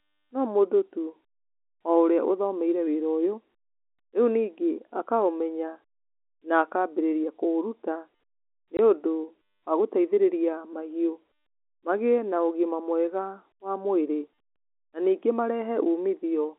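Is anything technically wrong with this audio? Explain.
Yes. Packet loss filled with silence occurs at 8.77 s. Packets went missing and the receiver played silence instead, opening a 20 ms gap that fits two 10 ms packets. Its abrupt edges briefly chop the speech, which has the narrow 200 Hz to 3.5 kHz band of G.711 telephone coding.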